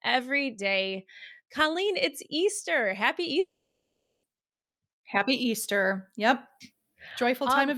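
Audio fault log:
3.39–4.25 s, long network dropout: audio delivery likely stalled. The last sound fades into silence for most of 0.84 s, and the speech returns with that stretch lost.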